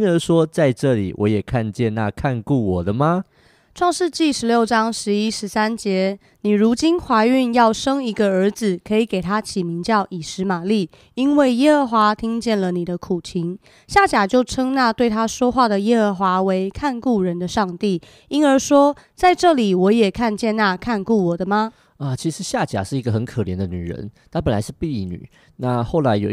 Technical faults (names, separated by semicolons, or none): drift correction step